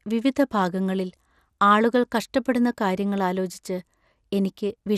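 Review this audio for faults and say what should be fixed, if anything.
The speech was likely encoded as MP2 with too few bits, so upper sub-bands are switched off and the rest coarsely quantised. Throughout, nothing sounds above 14.4 kHz, and a dull, gurgling graininess is plainly audible, which fits roughly 80 kbps. Re-encode from the original source at a higher bitrate or with a more efficient codec.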